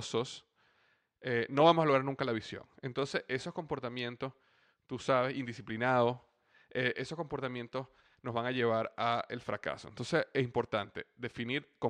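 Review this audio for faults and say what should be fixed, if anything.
Nothing stood out on listening to the speech here, so there is nothing to fix.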